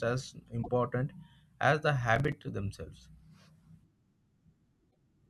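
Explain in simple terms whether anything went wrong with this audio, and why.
Two things go wrong in this speech. The first is damaged data in a compressed stream. It happens twice, from 0.59 to 0.69 s and from 4.87 to 4.96 s. Part of the stored file is corrupted there. The player cannot read those pieces. It loses its place and hunts for the next good piece. You hear a short chirp or blip.

The second is processor overload crackle, from 2.16 to 2.43 s. The computer gets too busy to prepare the sound in time. Each missed deadline leaves a tiny gap of silence, around 5 milliseconds long. There are several of these gaps in a row. Together they sound like a gritty crackle over the speech, and it stops once the computer catches up.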